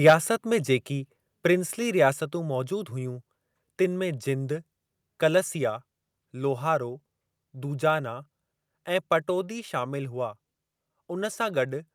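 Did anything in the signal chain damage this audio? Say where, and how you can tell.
Yes. At the converter stage, the microphone input was likely set too hot, driving the opening peaks about 7 dB past full scale between 0.06 and 0.14 s. This microphone overload flattens the waveform tops, and roughly a tenth of the samples in that stretch sit pinned at the limit. The squared-off peaks add a harsh, crackling edge right at the start of the speech, where the loudest energy is.

In call processing, the software likely reacted to that clipping by cutting the device's input gain in a single step of about 3 dB at 0.1 s. This microphone volume stepped down event is audible as an abrupt drop in level partway through the distorted burst, with the speech and the background falling together. Because the change is instantaneous rather than gradual, the level shift sounds like a small step.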